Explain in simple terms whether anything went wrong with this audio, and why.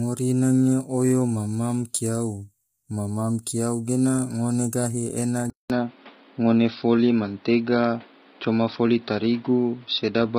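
Throughout, the speech was likely squeezed hard by low-delay AAC compression, the kind used in video calls, leaving the voice rough and grainy with a dulled, synthetic-sounding top. At 5.5 s, the input switched to a poorer device, likely another microphone or a headset: after a brief gap, the voice turns duller and changes in level, with new background noise.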